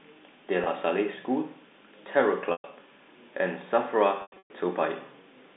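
Packet loss with pitch repetition occurs three times. The receiver repeats the last pitch period to fill each gap. At 0.64 to 0.66 s, 20 ms is lost: a brief buzzy hold. At 2.52 to 2.64 s, 120 ms fades toward silence. From 4.22 to 4.50 s, scattered losses total 240 ms, giving choppy breaks.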